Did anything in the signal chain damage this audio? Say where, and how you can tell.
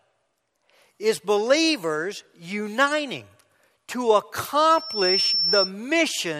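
Yes. A loudspeaker feedback squeal enters through the acoustic and analogue path from 4.70 to 5.72 s. A single 5.4 kHz tone swells over about 0.4 s to roughly speech level, because the microphone is re-amplifying the loudspeaker at above unity gain. On a spectrogram it appears as one bright horizontal line.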